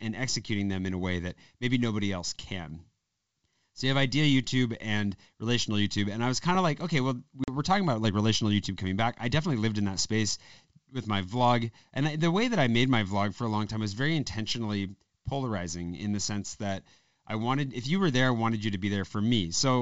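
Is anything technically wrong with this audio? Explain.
Yes. At 7.44 to 7.49 s, between "of like okay well" and "were talking about like", there is packet loss on an ADPCM call: about 40 ms, a couple of packets, drops to silence. The decoder's predictor and step size then mismatch the sender's, so speech resumes with brief distortion before settling. The G.722 wideband coding itself sounds clean.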